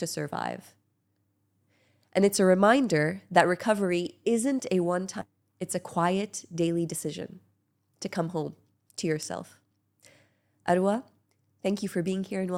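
At 5.21 to 5.23 s the audio shows a skip ahead: about a second of material is simply gone, and the two sides are butted together with no silent gap. That seamless join is what separates it from a dropout, which would leave an audible hole. From 5.31 s to 9.86 s a jitter buffer speed-up follows, as the receiver trims tiny pitch-period slices to shed almost half a second of excess delay. Playback runs about 7% fast while pitch stays unchanged, which distinguishes it from a sample-rate error.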